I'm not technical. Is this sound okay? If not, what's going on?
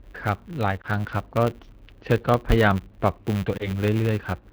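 No, the sound has problems. It is speech that has been through a phone-style system, and three things went wrong.

First, the call was carried by the AMR wideband (HD Voice) codec running at one of its lowest quality settings. This codec rebuilds speech from a simplified model of how a voice is produced and fills the very top of the range with shaped hiss. When it has this little data to work with, the model can't keep up, so the whole clip sounds rough, raspy and slightly artificial.

Second, a filter restarted on every block. A processing step in the chain forgets what it was doing at the end of each short chunk of audio and starts the next chunk from nothing. Each restart leaves a tiny click, and those clicks repeat 100 times a second. They blend into a steady buzz under the sound that gets louder when the speech is louder.

Third, there are lost AMR speech frames at about 0.81 to 0.86 s and at about 3.58 to 3.70 s. 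Each time, one small packet of speech was damaged in transmission. The decoder hid the gap by repeating the last good sound at a fading level. You hear a short dip or wobble, and the speech comes back a little rough for a moment after.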